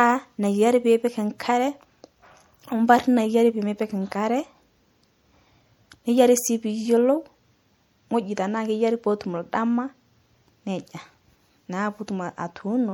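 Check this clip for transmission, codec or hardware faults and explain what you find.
One codec fault runs through the whole speech recording. Across the full clip there is plainly audible damage, likely from MP3 compression at a rate that fits about 64 kbps. The encoder drops weak frequency lines that flicker between frames, so the audio sounds watery and swirly, with metallic chirps on s sounds and smeared attacks.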